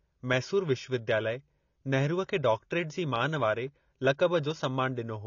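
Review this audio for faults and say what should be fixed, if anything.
Likely AAC compression, at a bitrate that sounds near 24 kbps, removes everything above 6.9 kHz throughout, leaving the speech audibly dull and smeared. Encode at a higher AAC bitrate or use a lossless path so the treble and detail survive.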